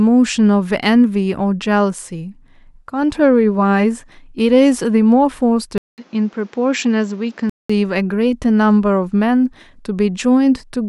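The clip is speech. From 5.78 s to 7.70 s the sound turns dull and boxy. Nothing reaches above 7.7 kHz in that stretch. A short gap of 200 ms opens at the switch. A faint new background noise appears, far below the speech. The loudness barely changes. After 7.70 s the full brightness returns. The likely cause is an input switched to a poorer device, with a narrower band and its own noise floor.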